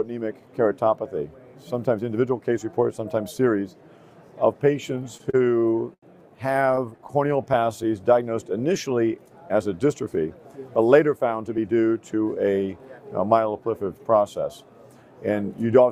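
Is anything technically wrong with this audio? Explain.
Yes, there are three kinds of playback fault, all from the receiver's jitter buffer.

Repeated stalls (stutter), from 5.17 to 6.04 s and again from 6.52 to 7.10 s: the audio catches and drags in small hitches. The first stretch has six gaps totalling 192 ms, the longest 87 ms. The second has six brief gaps totalling 69 ms, none longer than 16 ms. Packets arrived late, the buffer ran dry, and the receiver extended the last sound to cover each gap. Nothing is lost, but the flow stumbles.

Jitter buffer slow-down, from 6.86 to 7.91 s: the audio drags at unchanged pitch, running at 90% speed. The receiver was rebuilding its reserve. It repeated tiny cycles of the waveform to stretch this second by 108 ms.

Jitter buffer speed-up, from 9.92 to 10.37 s: the audio sounds briefly hurried at the same pitch, running at 113% speed. The buffer had more queued audio than it needed. 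To shed the excess delay, the receiver cut out short waveform cycles, about 70 ms in all.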